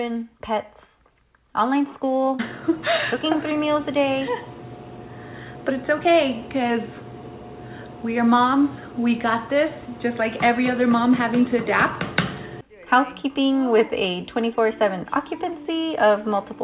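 No technical faults are audible anywhere in the audio.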